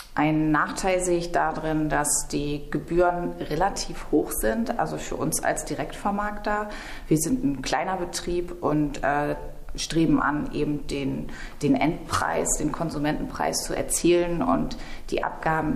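Nothing technically wrong can be heard in this audio. It holds steady throughout, with no dropouts, glitches or other disturbances at any point.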